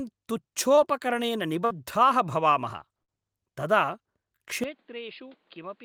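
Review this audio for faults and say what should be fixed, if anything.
Short concealed packet loss at 0.75 to 0.79 s: about 20 ms of the speech never arrived in time, and the receiver bridged the hole by extending the preceding sound before blending back into the real signal, leaving a brief smear or wobble. Better jitter buffering or forward error correction on the link would prevent it.

Burst of packet loss at 1.65 to 1.72 s and again at 3.02 to 3.10 s: roughly 60 ms went missing each time, so the decoder carried the last sound forward and faded it, giving a held buzz or dying hiss before the speech picks up further along. A more robust network path or redundancy for consecutive packets would prevent it.

Input switched to a poorer device from 4.64 s to the end: the speech abruptly loses everything above 5 kHz, drops by about 10 dB and gains a new noise floor roughly 35 dB down, with no gap at the change. 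This is likely the system jumping to another microphone or a headset call profile. Locking the input device for the whole session would prevent it.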